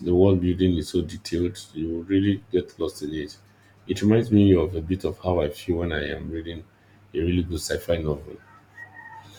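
No technical faults can be heard anywhere in the speech recording.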